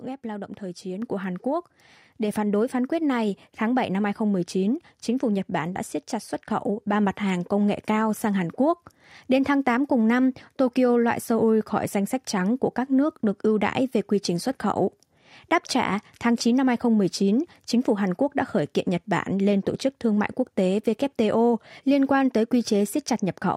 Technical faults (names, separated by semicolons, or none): microphone volume stepped up